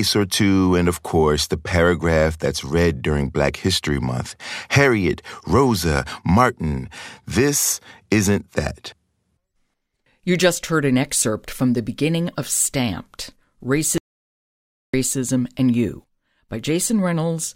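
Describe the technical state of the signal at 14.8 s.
At 14.8 s the signal is inside an audio dropout to silence running from 13.98 s to 14.94 s, roughly 0.96 s of silence. The speech cuts off abruptly and returns just as abruptly, with no room tone or noise floor in between. This is likely a momentary loss of input, such as a link failure or brief mute, while recording continued writing zeros, so any speech in that span is unrecoverable.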